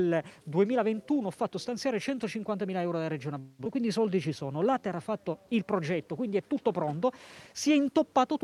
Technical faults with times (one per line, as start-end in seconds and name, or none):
3.39-3.67 long network dropout
3.82-5.03 jitter buffer slow-down